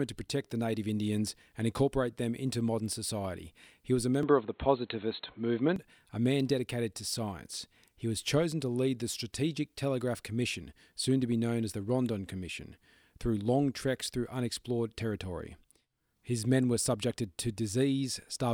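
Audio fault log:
4.23–5.76 s, input switched to a poorer device: recording likely moved to a narrower-band microphone or headset profile after "was a", losing everything above 4.2 kHz. The speech turns dull and boxy, with faint new background noise and a modest level change, then clears by "a man dedicated to", with no gap at the switch.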